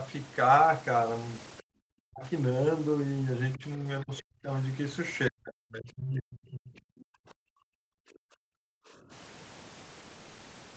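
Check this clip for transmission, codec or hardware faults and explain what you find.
One fault recurs in this speech clip: the talker is repeatedly ducked, consistent with speech suppressed in double talk. The sound stops at 8 kHz throughout, which fits a wideband call codec.

Dips occur at 1.61–2.24 s, 3.56–3.85 s, 4.02–4.5 s and 5.29–9.11 s. The longest and deepest cut the level by roughly 40 dB, while the 3.56 s dip is shallower, around 10 dB. The likely cause is an echo canceller that, facing simultaneous far-end sound, could not tell near speech from loudspeaker echo and attenuated both. The result is speech dropping out in chunks.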